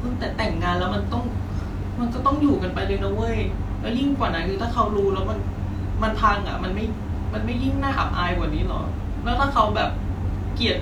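No technical faults are audible.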